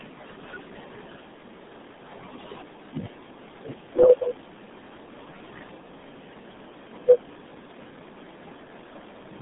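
Throughout the speech, everything sounds muffled and gargly, confined to roughly 150 Hz to 3.6 kHz with nothing above 3.8 kHz. This is the RealAudio 14.4 codec, whose heavy, coarse coding for dial-up modems, consistent with an 8 kbit/s rate, strips the highs and smears the speech.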